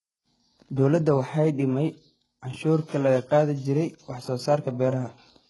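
The speech carries heavy HE-AAC compression throughout, at a low bitrate likely around 12 kbps. The treble is rebuilt from copied lower bands, so s sounds turn gritty and lispy. Nothing remains above 11.5 kHz.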